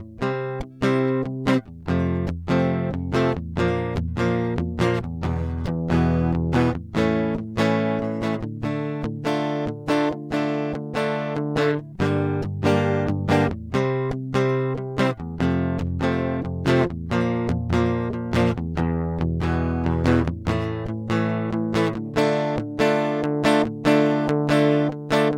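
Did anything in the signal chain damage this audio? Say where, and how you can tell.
No, nothing damaged this music.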